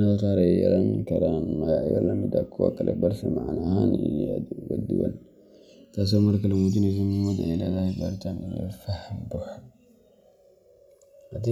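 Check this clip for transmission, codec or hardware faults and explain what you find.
One fault runs through the whole speech clip. Channels drifting apart, throughout: left and right come from separately clocked devices, off by roughly 200 ppm, so their offset creeps to about 2 ms by the end. Summed to mono, the sliding comb notches give a slow, sweeping flange.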